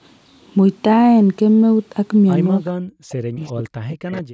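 From 2.73 to 3.42 s the talker's voice sinks abruptly, falling by something like 40 dB at its deepest over roughly 0.7 s. This is speech suppressed in double talk. With both ends speaking at once, the echo canceller likely could not tell the near talker from the loudspeaker's returning sound, so it pulled the whole microphone signal down rather than risk passing echo.

Right after, from 3.46 to 3.63 s, a faint, delayed copy of the voice appears, about 0.42 s behind the original and roughly 15 dB quieter. It returns from 3.88 to 4.22 s, again 0.43 s late and weaker still, around 20 dB under the speech. This is echo leak. The far end was likely playing the call on a loudspeaker, and its canceller left part of what its microphone picked up, which travelled back down the line.

From 3.7 s to the end at 4.33 s the room sound itself collapses, dropping by about 40 dB over roughly 0.4 s in total. 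This is background gated by the echo canceller. While loudspeaker audio was active, the canceller clamped the microphone hard, muting the ambience along with any residual echo. The call microphone chain's band limit leaves nothing above 8 kHz.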